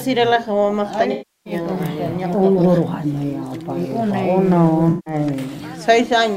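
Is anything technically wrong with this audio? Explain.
Yes. AAC frame loss with concealment occurs at 1.11 to 1.53 s and 4.89 to 5.14 s. Missing frames, roughly 340 ms and 170 ms worth, were patched by the decoder, which rebuilt each gap from the last good spectrum, producing smeared, phasey, noise-tinged stretches.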